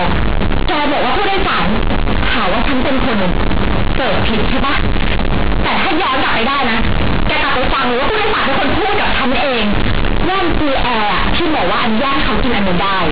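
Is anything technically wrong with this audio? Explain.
Yes. Throughout the whole clip, companded audio is read as linear. The mu-law bytes play as plain 8-bit samples without expansion. Sign changes swing hugely, giving loud, buzzy distortion and noisy pauses.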